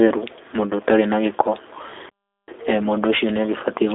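G.729 coding runs throughout the speech. Each 10 ms frame is rebuilt from a vocal tract filter, pitch predictor and a few pulses, giving a rough, slightly synthetic texture that fits an 8 kbit/s stream, with the band held to roughly 250 Hz to 3.6 kHz and nothing above 3.7 kHz.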